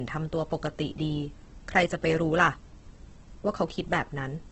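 Low-bitrate audio saved at a high bitrate, throughout: nothing sounds above 8.2 kHz, likely a low-bitrate encode's cut-off that the later high-bitrate MP3 cannot restore.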